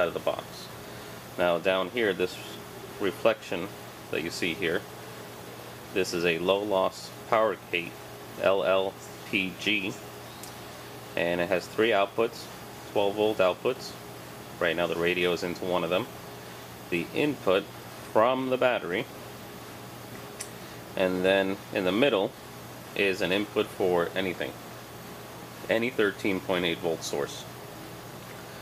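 Nothing stood out on listening to this audio.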